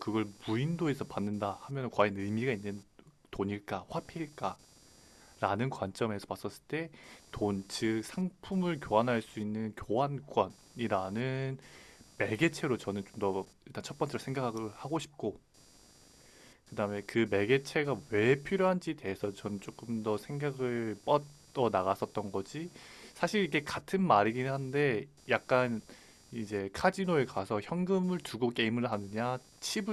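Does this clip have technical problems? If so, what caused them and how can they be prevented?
Yes. Computer activity noise runs through the whole speech clip. A buzzing, chirping pattern pulses at around 300 Hz, about 30 dB below the voice. It follows processor and mouse load shifting the shared audio ground, not the speech. Prevent it with an isolated USB interface or ground-loop isolator.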